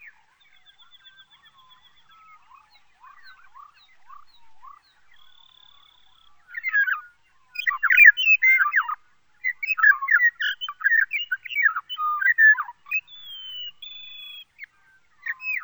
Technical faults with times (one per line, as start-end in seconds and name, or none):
0.00-15.63 stereo read as mono